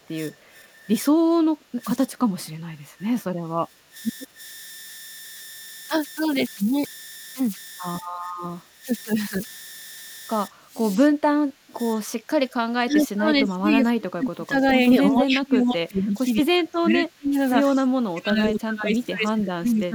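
A delta-sigma converter running without dither produces converter idle tones throughout this speech clip: a tone around 2 kHz, about 20 dB below the signal, sits under the voice. An echo canceller likely confused by double talk causes speech suppressed in double talk, ducking the voice by roughly 15 dB at 0.0–3.95 s, 4.27–4.38 s and 8.02–8.87 s, and by roughly 25 dB at 10.5–14.59 s and 14.98–19.94 s. A brief echo leak, likely from incomplete cancellation on a loudspeaker end, returns a very faint copy of the voice about 40 dB down, delayed by 182 ms, at 2.45–2.49 s.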